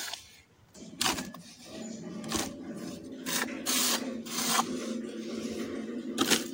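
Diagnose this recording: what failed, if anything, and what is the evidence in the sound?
Nothing here points to a failure at any stage, from the wiring through to playback, so there's nothing to diagnose and the sound can be taken as it is.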